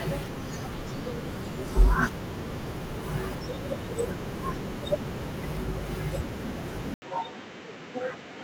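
Speech runs through the whole recording with sample clock jitter: the converter's clock wanders by roughly a microsecond, so each sample is taken at a slightly wrong instant. The resulting error tracks how fast the waveform is changing, sitting roughly 45 dB below the signal as a fine hiss and roughness. It thickens on loud passages and sibilant, high-frequency energy, and drops away in the pauses. At 6.94 s the sound cuts out for 80 ms and then returns duller and boxier until the end. Nothing is left above 8.1 kHz, the level is about 10 dB lower, and a new noise floor appears around 30 dB below the speech. This points to an input switched to a poorer device, likely a fallback microphone or a headset call profile with a narrower band and its own character.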